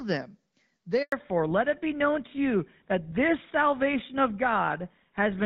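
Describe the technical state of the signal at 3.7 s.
At 3.7 s you're inside a fallback to narrowband that kicks in at about 1.12 s and runs to the end of the clip. The call has dropped out of HD Voice, from a wideband coder that sounds like AMR-WB at around 12.65 kbit/s down to an older narrowband one, which fits GSM full rate. Nothing above 4 kHz survives, so the speech sounds duller and rougher than it did in the first second.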